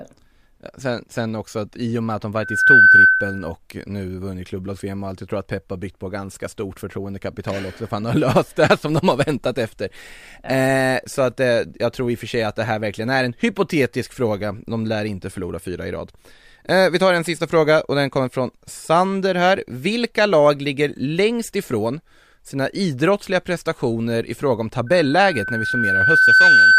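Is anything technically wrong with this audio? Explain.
Yes, loudspeaker feedback squeal occurs twice. At 2.39 s, just after "och med att de", a 1.5 kHz tone swells within a fraction of a second and holds until 3.52 s. At 24.86 s, after "prestationer i fråga om", the same tone rises over about a second and a half and runs to the end. A microphone is hearing its own loudspeaker, with loop gain above unity at 1.5 kHz, so that tone feeds itself and peaks at about 10 dB above the speech.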